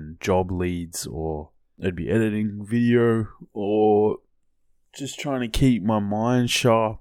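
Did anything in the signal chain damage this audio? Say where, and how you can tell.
No, nothing in the signal chain audibly damaged this speech recording. None of the stages from capture to playback leaves any trace that can be heard anywhere in the clip.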